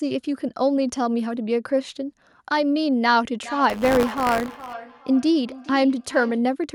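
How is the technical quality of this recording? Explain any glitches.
The recording has two overlapping faults in its second half, both in the speech.

From 3.44 to 6.53 s there is feedback echo between two devices. A second device in the room replays this microphone's audio, and the microphone picks it up again. Its own echo canceller ignores that sound, so speech returns about every 0.4 s, peaking around 15 dB below the voice. A spectrogram shows fainter, delayed copies of each speech pattern trailing behind it.

From 3.69 to 4.74 s there is buffer tearing, a rattling 100 Hz buzz heard only while speech is present. The writer and reader of a ring buffer have crossed, so a small slice of each period carries audio from roughly 20 ms earlier, joined abruptly. The waveform shows sharp discontinuities every 10 ms, and the spectrogram shows evenly spaced vertical lines.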